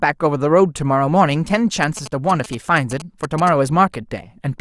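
From 1.83 s to 3.49 s the speech is overlaid with GSM signalling bursts. A nearby 2G handset is transmitting short clusters of radio bursts, the kind sent while it is signalling to the network, and the audio circuitry is rectifying that RF into the signal path. The result is a galloping dit-dit-dit of brief buzzes with a 217 Hz repetition rate, sitting roughly 15 dB below the speech.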